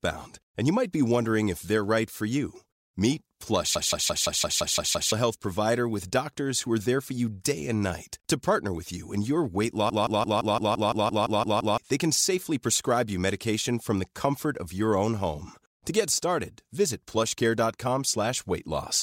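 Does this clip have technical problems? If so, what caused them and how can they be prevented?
Yes. A system hang loop hits at 3.76–5.12 s and 9.90–11.78 s: one 171 ms slice repeats, a 5.9 Hz stutter, seen as identical tiled waveform blocks. Preventing it means keeping the audio thread from stalling, with real-time priority and drivers that don't block.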